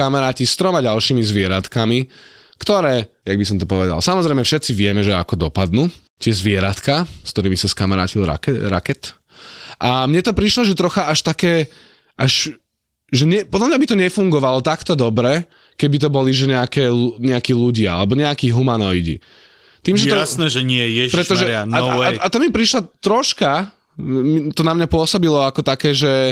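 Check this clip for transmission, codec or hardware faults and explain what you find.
No transmission, codec or hardware problems turn up here: the speech comes through Opus voice compression at around 20 kbps in its hybrid mode with the full band kept, and the only trace of it is a light touch of coding texture that sits quietly in the background.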